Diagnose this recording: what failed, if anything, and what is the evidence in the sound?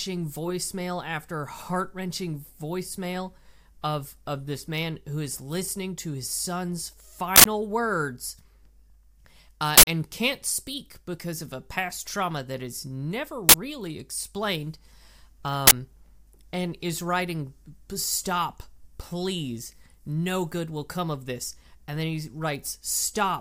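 An uninitialised buffer fault at the driver or buffer stage: loud digital-noise bursts hit the speech at 7.36, 9.78, 13.49 and 15.67 s, lasting 93, 93, 46 and 46 ms. Unfilled blocks played stale memory as samples, fitting 4096- and 2048-sample buffers.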